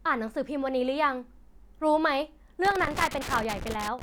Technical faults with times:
2.65-4.02 loose connector crackle

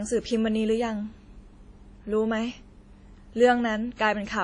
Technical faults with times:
0.00-4.44 transcoding between lossy codecs

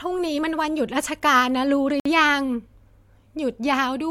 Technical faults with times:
2.00-2.05 gap between stream segments

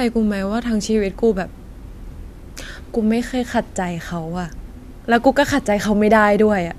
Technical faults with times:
none

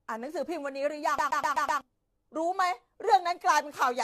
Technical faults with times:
0.00-4.03 generation loss
1.18-1.81 CD stuck on one turn
3.81 bit error spike

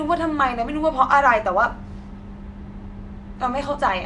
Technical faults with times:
0.00-4.06 Nellymoser compression

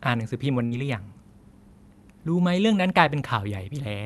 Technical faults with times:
0.65-0.72 burst of packet loss

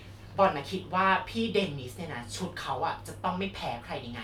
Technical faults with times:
none

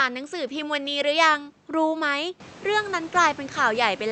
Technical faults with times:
none

